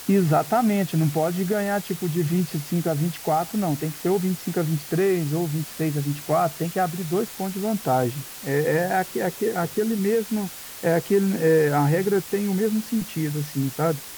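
Throughout the speech, a low bit depth with dither lays a steady, even hiss only about 15 dB below the signal, which fits roughly 5-bit audio. Unlike undithered quantisation, the rounding error stays constant noise instead of a gritty distortion that tracks the signal.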